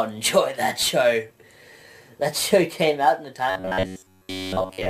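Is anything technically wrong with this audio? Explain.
Yes. From 3.50 s to the end at 4.90 s, the sound turns rigid and metallic, with a steady buzz near 94 Hz that stays fixed however the underlying audio moves. This is robotic sound from repeated short buffers, likely caused by new audio arriving too seldom, so playback fills the gaps by looping the last fragment, about 10.7 ms long, for most of that stretch. Each repeat imposes that fixed pitch, while the sound follows the original only as a rough outline.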